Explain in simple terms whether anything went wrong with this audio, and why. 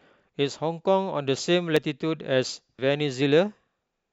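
Yes, something went wrong: the recording software likely fell behind, so the hardware overwrote unsaved audio, a dropped buffer (overrun). The speech jumps ahead at 1.77 s, losing about a twentieth of a second, and at 2.79 s, losing about a tenth.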